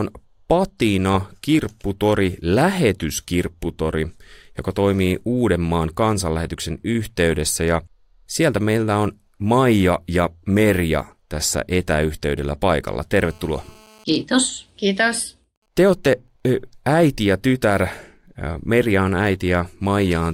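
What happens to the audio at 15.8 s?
At 15.8 s you're inside a stretch of GSM signalling bursts, running from 14.12 to 16.40 s, just before "äiti ja tytär". The radio bursts of a nearby 2G phone, apparently in a call with its user silent, get rectified by the audio circuit, giving faint even ticks with a longer 217 Hz buzz twice a second, about 45 dB under the speech.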